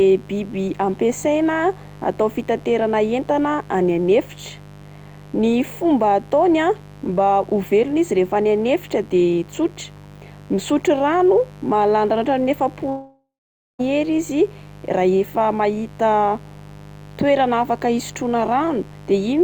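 A mains buzz sits under the speech from start to finish, about 20 dB below it. Spiky interference from a dimmer, rectifier or unshielded lead repeats twice per 50 Hz cycle, spreading harmonics into the kilohertz range, so it rasps rather than droning like a smooth, pure low hum.

From 12.89 s to 13.81 s the speech stops and its last sound is stretched into a fading fill, then about half a second of near silence, before speech resumes with roughly 0.9 s missing. This is likely a long network dropout, unlike a brief glitch or click.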